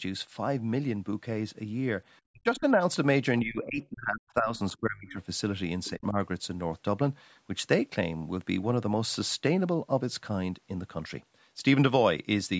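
This is a speech clip where the talker's level dips sharply at 2.3–2.8 s (around 40 dB at worst), 3.43–5.2 s (around 25 dB) and 5.9–6.15 s (around 15 dB). That's speech suppressed in double talk, likely the echo canceller ducking everything while both sides spoke. Faint scraps of the other side's voice leak through at 2.57–2.64 s and 5.84–5.9 s, roughly 25 dB below the talker, likely where the canceller left some loudspeaker echo in the microphone signal. The call's microphone processing leaves nothing above 8 kHz.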